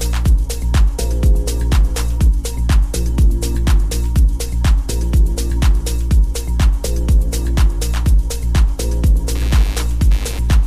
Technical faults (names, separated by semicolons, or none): computer activity noise